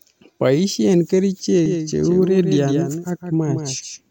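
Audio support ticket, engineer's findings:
Doubled audio track from 1.66 s to end of clip. Speech heard twice: second full-band copy trailing by roughly 150 ms, around 5 dB quieter, no decay or room colour, so it sounds like a clean slapback rather than reverb. Copy cuts in abruptly at 1.66 s and persists to the end. Likely cause: same signal captured twice, one route through a slower capture path or an edit holding two out-of-step copies, both summed into the mix.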